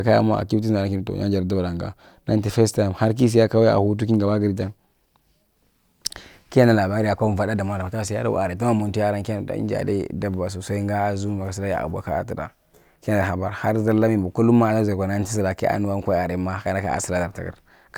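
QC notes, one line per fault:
No faults found in this speech clip; nothing to log.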